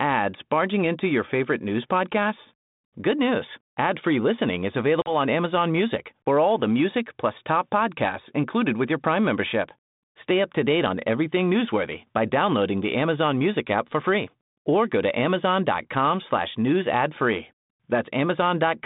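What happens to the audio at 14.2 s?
At 14.2 s the speech carries on intact, with no fault at that moment.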